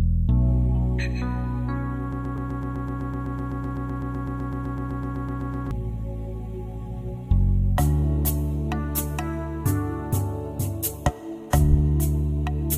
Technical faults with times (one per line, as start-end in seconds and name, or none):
2.13-5.71 broken-record loop